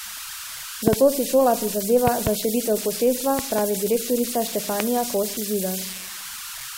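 A short speech recording with two separate problems. Running the whole way through are converter idle tones: a whistle somewhere around 1.5 kHz, plus grainy noise under the quieter stretches, sitting only about 9 dB below the speech. That sound points to a delta-sigma converter running without dither, which settles into repeating bit patterns whenever its input gets small, and those patterns come out as a steady tone. On top of that there are loud pops, most likely plug, switch or static glitches hitting the signal path, with the speech carrying on underneath. Three of them are double pops: one from 0.88 to 0.95 s, peaking about 20 dB above the speech just before "si šola"; one from 2.07 to 2.29 s, about 15 dB up, between "si šola" and "za širitev posestva"; and one from 3.39 to 3.61 s, also about 15 dB up, right after "za širitev posestva". The last is a single sharp pop at 4.80 s, about 20 dB above the speech.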